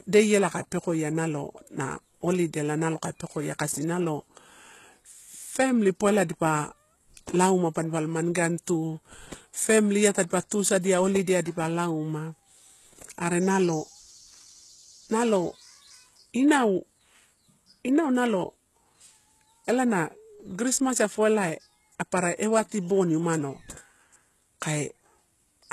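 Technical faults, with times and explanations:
Throughout, HE-AAC compression (likely): heavy coding damage across this speech, with nothing above about 12.3 kHz. The upper band sounds rebuilt from copied lower bands under a coarse envelope, so its harmonics misalign and s sounds turn gritty and lispy, pointing to roughly 16 kbps.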